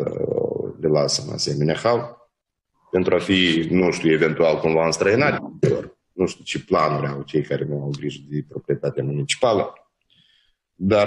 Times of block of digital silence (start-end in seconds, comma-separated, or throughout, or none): none